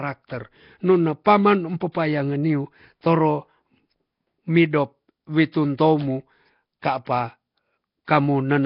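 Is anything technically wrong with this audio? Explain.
Yes. Two faults are audible in this speech clip.

Throughout, the speech has a rough, hissy halo and a smeared, underwater character, and nothing sounds above 5.3 kHz. The cause is likely Nellymoser compression, the Flash-era microphone codec. It codes fixed 256-sample blocks at about two bits per sample, so weak bands get no bits and are replaced with synthetic noise. The damage is heavy, consistent with a low bitrate around 22 kbps.

Pre-echo occurs three times: at 1.25 s (about 13 ms), from 1.92 to 1.95 s just before "niu toro" (about 27 ms), and from 7.05 to 7.07 s (about 21 ms). In each case a sharp onset falls late in a coding block. The quantisation noise, sized for the loud attack, is spread across the whole block, including the quiet moment before it. You hear a brief hiss leading into each attack, and the attack itself sounds softened and smeared.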